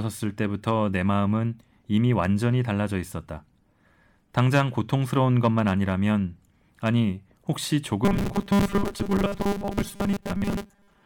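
From 8.05 s to the end, the speech has robotic sound from repeated short buffers. A rigid metallic buzz at 200 Hz replaces it, loosely tracking the words. This likely comes from a 5 ms slice being looped while most real audio is skipped.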